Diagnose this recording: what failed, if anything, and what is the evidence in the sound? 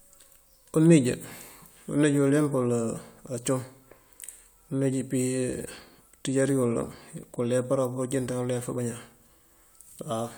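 Nothing failed here; I listened closely and the speech comes across with no audible defect from any stage of the chain.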